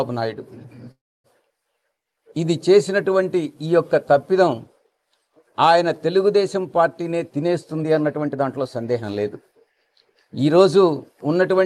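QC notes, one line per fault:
0.91–1.27 s, call audio freeze: sound stalls into a brief fading buzz then near-silence, likely from delayed packets draining the jitter buffer; about 0.33 s inserted.
7.14–9.16 s, jitter buffer speed-up: audio runs about 9% fast at unchanged pitch, sounding hurried, as the receiver trims roughly 0.2 s of pitch periods to cut delay.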